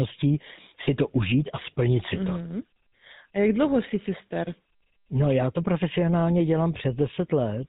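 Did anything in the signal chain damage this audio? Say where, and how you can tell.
Yes, the codec stage did. The whole speech clip carries GSM full-rate codec damage: nothing above 4 kHz and a buzzy, gravelly grain throughout. That's a vocal-tract model fed by sparse regular pulses, which fits a 13 kbps GSM encode, and it's plainly audible.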